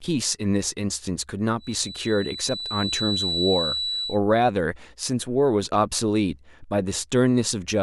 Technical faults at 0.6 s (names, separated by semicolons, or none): none